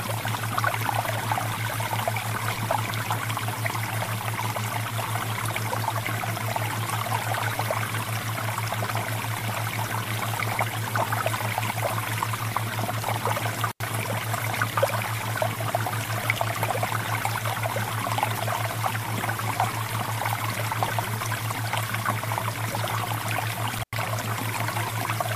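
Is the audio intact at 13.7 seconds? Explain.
No. From 13.71 to 13.82 s an intermittent contact breaks the signal: a loose plug or cable opens for about 80 ms, dropping the sound to faint hiss with crackle at each edge. The waveform shows a near-flat gap bracketed by sharp spikes, and the spectrogram shows a dark band between broadband vertical streaks.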